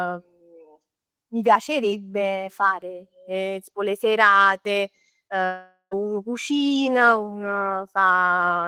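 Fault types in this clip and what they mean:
Short concealed packet loss: A brief smear or wobble in the speech from about 5.27 to 5.32 s. Around 20 ms of audio reached the decoder too late, so the receiver bridged the gap by extending the preceding sound, then blended back into the real signal.
Long network dropout: From 5.46 s the speech becomes a continuation of the last sound that fades out, leaving about 90 ms of silence before audio returns at 5.93 s. The likely cause is a network stall that lost roughly 460 ms outright.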